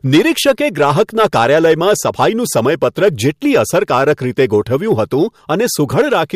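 Hard clipping runs through the whole of this speech clip: the signal is driven about 6 dB past what a stage in the chain can pass, so the loudest peaks, a small share of samples, are sheared flat, adding high harmonics heard as crackle on loud syllables.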